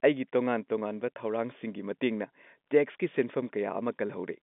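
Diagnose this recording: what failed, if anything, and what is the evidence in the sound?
Nothing in the recording has failed: it carries the narrow band of a telephone line running normally, roughly 200 Hz to 3.6 kHz with nothing above 3.8 kHz, consistent with G.711 mu-law telephone coding at 64 kbps.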